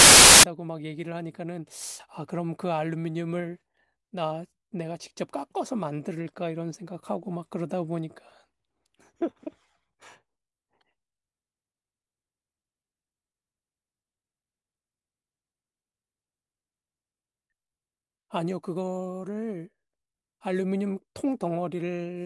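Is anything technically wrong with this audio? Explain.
Yes. From 0.00 to 0.43 s, there is a burst of very loud white noise with hard edges. This is file tags played as audio. An embedded cover picture, stored as compressed data, is being read as samples. Its random-looking bytes come out as loud static.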